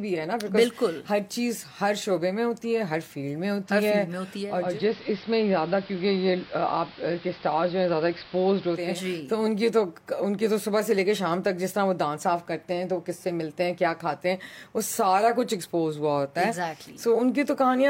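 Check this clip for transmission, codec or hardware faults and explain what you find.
One fault: digital radio blending to analogue, from 4.44 to 9.06 s. Over a 0.4 s cross-fade the receiver drops to the AM broadcast: level down about 1 dB, hiss roughly 20 dB below. Arriving hiss separates this from a codec bandwidth cut.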